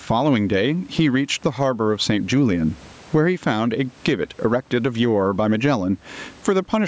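Gain pumping runs through the whole clip: the level swings by around 20 dB. The likely cause is a fast limiter pulling down gain that is set far too high, squashing the speech.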